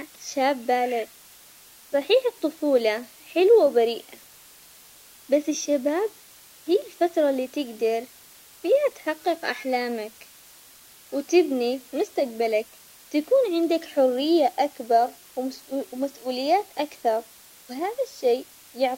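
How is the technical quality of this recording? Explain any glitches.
The technical quality is poor because of one fault. Low bit depth with dither runs throughout. The sound points to a 7-bit signal. Dither turns the rounding error into a steady, even hiss, roughly 25 dB below the speech, without distortion.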